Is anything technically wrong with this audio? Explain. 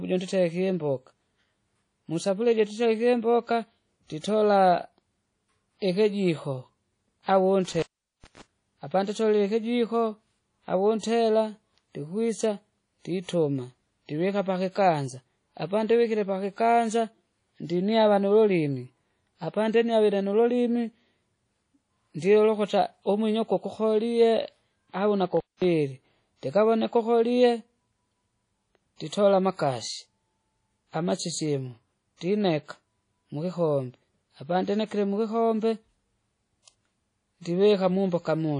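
Yes. The speech carries three problems: codec damage throughout, one pre-echo, and two dropouts from an intermittent contact.

Throughout the clip there is plainly audible coding damage, most likely from WMA compression. Nothing is present above 10.1 kHz, and the damage is consistent with a low bitrate of around 32 kbps. A transform codec like this quantises each block of frequency lines coarsely, zeroing weak lines and smearing noise across the block. The result is a dull, ringing, washy sound with hiss that rises and falls with the signal.

At 4.19 to 4.24 s, just after "musafuria ija tutarike imboka", there is pre-echo lasting about 49 ms. A sharp attack landed late in a transform block, so quantisation noise sized for the loud onset was spread back into the quiet stretch before it. The attack is preceded by a short hiss and comes across as softened and smeared rather than crisp.

An intermittent contact interrupts the signal twice. 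The first runs from 7.64 to 8.42 s, just before "apanditolile ikijiko", with the line open for about 416 ms. The second runs from 25.37 to 25.64 s, open for about 214 ms. In each case a loose cable or plug briefly breaks the connection, so the sound drops out or breaks up, with crackle at the edges where the contact opens and closes.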